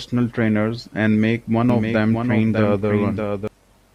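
From 1.70 s to 3.48 s the speech gains a second, slightly quieter copy of itself trailing roughly 0.7 s behind, a few decibels down, with no reverb tail or room colour, switching on and off abruptly at those points. This is a doubled audio track, most likely from the same signal reaching the mix twice, once through a slower capture path or an edit that left two out-of-step copies.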